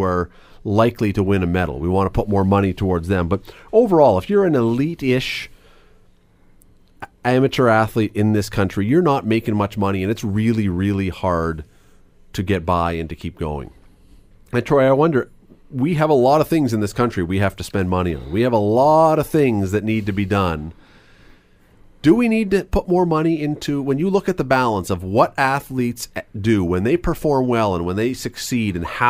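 No technical faults can be heard anywhere in this speech recording. There is nothing here that calls for a timestamp or a description of a fault.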